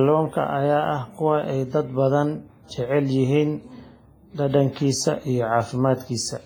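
Throughout the speech, heavy WMA compression leaves ringing and a washy hiss that breathes with the signal, likely from a low-bitrate transform codec, fitting about 24 kbps. A spectrogram shows smeared onsets and patchy gaps where weak components were zeroed.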